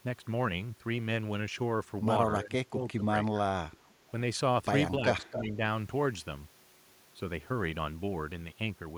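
Speech suppressed in double talk appears twice, from 2.41 to 3.02 s and from 4.97 to 5.61 s. In the first stretch the speech dips by roughly 15 dB in pieces totalling about a third of a second. In the second it sinks by around 10 dB for about half a second. The likely cause is an echo canceller that met simultaneous talk from both ends and, unable to separate near speech from loudspeaker echo, attenuated everything.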